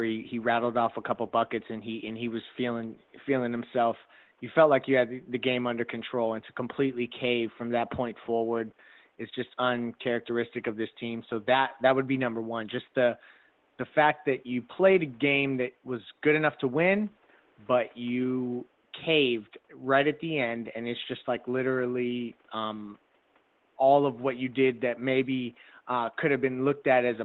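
There are no technical faults to describe in time order; the only background is the room's own noise, sitting about 39 dB below the speech.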